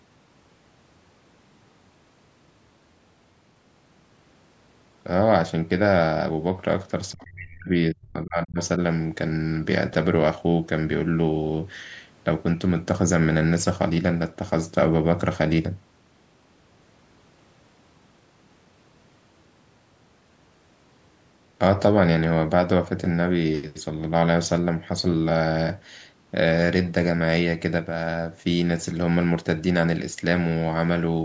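From 7.12 to 7.72 s and again from 7.89 to 8.59 s the speech sinks deeply, nearly vanishing, likely speech suppressed in double talk as the echo canceller ducks both sides.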